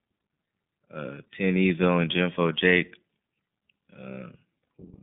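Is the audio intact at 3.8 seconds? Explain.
No. At 3.8 seconds, as throughout, the iLBC codec limits speech to 150 Hz–3.6 kHz, coding each 30 ms frame independently, leaving a plainly rough, synthetic, muffled quality.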